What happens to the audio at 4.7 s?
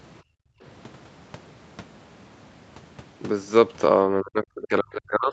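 At 4.7 s the speech is being pulled down by speech suppressed in double talk, running from 4.21 s to 5.32 s. The level drops by as much as roughly 35 dB. The likely cause is an echo canceller that, with both parties talking at once, couldn't tell the local talker from loudspeaker echo and attenuated everything.

Just before that moment, from 4.63 s to 4.67 s, there is a brief scrap of the other side's voice leaking through, roughly 20 dB below the speech. It is likely residual far-end audio from the loudspeaker that the echo canceller failed to subtract from the microphone signal.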